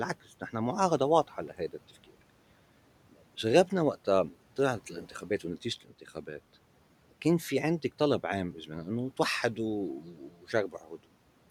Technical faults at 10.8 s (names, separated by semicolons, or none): speech cut by the noise suppressor